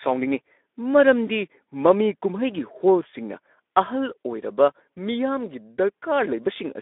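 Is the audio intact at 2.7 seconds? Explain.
No, at 2.7 s the Speex codec is at work, as it is throughout: the speech sounds hoarse and noisy, from too few excitation bits at a low setting near 11 kbps, squeezed into a 250 Hz to 3.6 kHz band.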